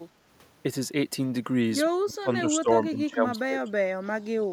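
From 1.96 to 2.69 s, and again from 2.89 to 3.7 s, the speech level drops sharply and recovers in pieces, with the deepest cut in the first stretch at roughly 30 dB and in the second around 20 dB. The likely cause is speech suppressed in double talk: with both ends active, the echo canceller could not tell this talker from loudspeaker echo and attenuated everything, so parts of the speech are pushed down or briefly cut out.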